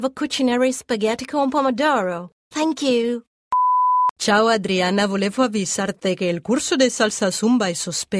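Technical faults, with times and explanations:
Nothing technical stands out here; there's no glitch, dropout or odd artefact anywhere in the clip.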